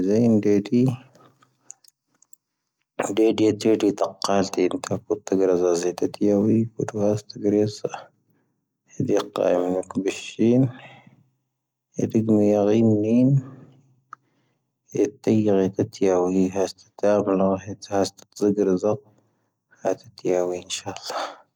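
No technical faults can be heard anywhere in the recording. The speech continues without interruption, and nothing in the signal points to a problem at any moment.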